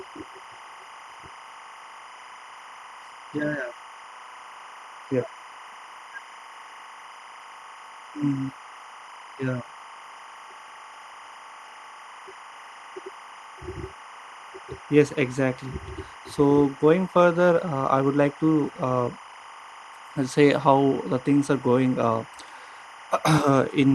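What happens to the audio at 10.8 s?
At 10.8 s, timecode bleed sits behind the speech, as it does from start to end. Linear timecode from a nearby track or cable is leaking into the audio. The code is a square wave that flips between two pitches, around 1 kHz and 2 kHz, at a frame rate that fits 25 frames per second. It comes through as a steady chirping warble, roughly 20 dB below the speech, through the narrowed band of the call path.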